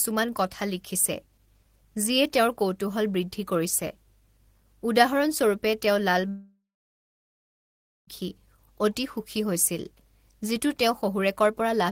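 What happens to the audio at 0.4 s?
Nothing goes wrong at 0.4 s; the speech plays through that moment intact, with no dropout, click or distortion.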